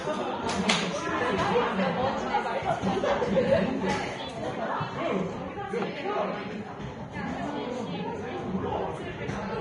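From start to finish, the audio has nothing above about 10.6 kHz, and the remaining treble is coarse and hissy, with a grainy, noise-like texture where fine detail should be. Tonal parts sound roughened and sharp attacks are smeared. The damage is heavy and the likely cause is Vorbis compression at a low setting, which fits a bitrate near 30 kbps. The encoder lowered its cut-off and replaced quantised high-frequency detail with noise of similar energy.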